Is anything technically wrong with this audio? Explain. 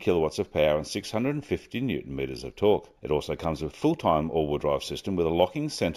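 Yes. Imaging from linear upsampling runs throughout the clip. Straight-line interpolation, which points to a 16 kHz to 48 kHz conversion, dulls the top of the band and leaves a mirrored image from 8 to 16 kHz, about 30 dB down, heard as a faint metallic shimmer on high-frequency sound.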